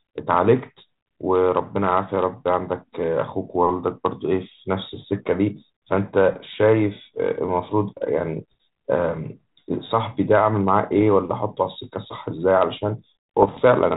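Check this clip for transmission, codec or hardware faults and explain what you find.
Two short bursts of bit errors on an ADPCM link stand out, over a G.726 ADPCM telephone path whose band stops at 4 kHz and which, at 32 kbit/s, adds only light coding roughness.

Bit errors on an ADPCM link occur at 10.98 to 11.03 s and again at 13.42 to 13.60 s. The second burst is longer and denser. Both point to an error rate of a fraction of a percent. Each flipped bit corrupts not just one sample but the decoder's adaptive step size and predictor, so the damage rings on for milliseconds until the decoder settles. The result is clicks and gritty, rasping bursts with momentary jumps in level. On a waveform these show as spiky excursions and brief amplitude bulges. On a spectrogram they appear as vertical broadband smears reaching the 4 kHz ceiling.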